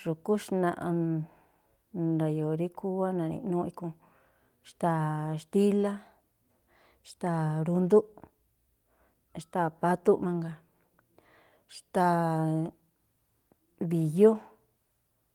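There are no technical faults to describe in this speech.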